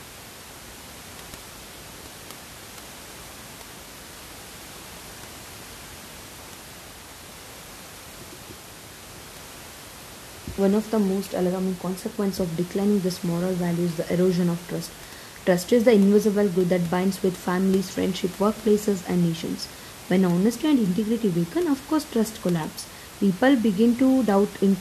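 Nothing stood out on listening to this speech recording, with only a low room noise sitting about 19 dB beneath the speech.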